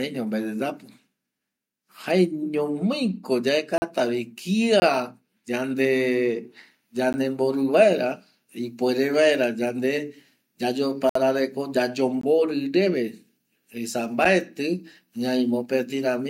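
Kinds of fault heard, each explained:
Block of digital silence: The speech drops to silence six times, for about 8 to 60 ms. Each hard cut clicks or leaves a short hole.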